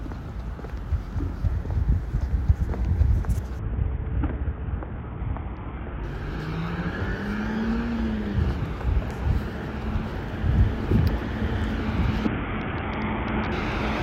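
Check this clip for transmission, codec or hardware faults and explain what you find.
Two episodes of a Bluetooth SBC bit pool drop affect the audio, from 3.59 to 6.04 s and again from 12.27 to 13.52 s. In both stretches the treble goes dull and a gritty, grainy noise rises under the sound, then clears as quality returns. This happens when a congested wireless link forces the sender to cut the bits given to each frame. The upper sub-bands get little or nothing and the rest are coarsely quantised. The depth of the loss points to a bit pool falling from 31 to about 6, near 55 kbps.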